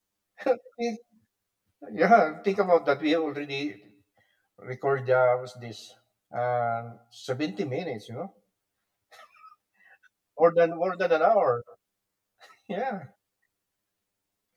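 One channel reaches the mix around 10 ms behind the other, and when the pair is folded to mono the shared content cancels at regularly spaced frequencies. This channel delay (comb filtering) runs through the whole clip, from the start to the end. The first notch falls near 50 Hz, with further notches roughly every 100 Hz above it, so the speech sounds hollow and phasey, as if heard through a tube, with a thinned, dulled body.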